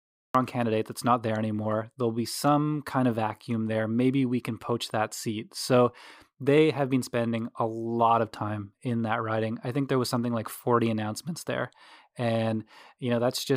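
Right at the top there's a cut-off start: the first 0.35 s is dead digital silence, then the speech jumps in mid-sound at 0.35 s with no natural attack. The capture clearly began late, so the opening of that first sound is just missing.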